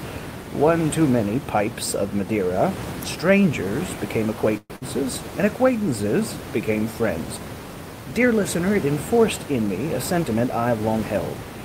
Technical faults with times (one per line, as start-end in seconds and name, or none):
4.57-4.73 call audio freeze
4.76-4.84 burst of packet loss
10.12-10.98 jitter buffer speed-up